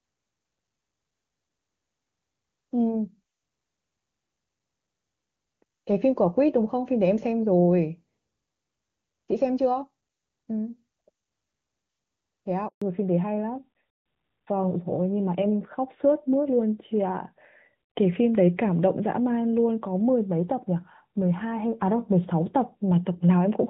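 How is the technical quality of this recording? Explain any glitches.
Two faults occur back to back a little past the midpoint. Before them the call runs on the AMR wideband (HD Voice) codec, and its clear, wideband speech suggests a high mode such as 23.85 kbit/s.

At 12.68 s a handover gap cuts the audio for 140 ms, until 12.82 s. The phone switched the call to another network, and no speech frames arrived during the transfer. The sound dies away within a few tens of milliseconds and stays silent until the new link starts carrying audio.

From 12.82 s to the end, the call falls back to narrowband. After the handover the link settled on an older narrowband codec, which points to AMR-NB at 12.2 kbit/s. Nothing above 4 kHz survives, so the speech sounds duller and rougher than before the gap.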